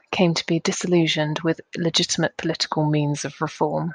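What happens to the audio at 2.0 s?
Nothing goes wrong at 2.0 s; the speech runs through that moment intact, with no dropout, click or distortion.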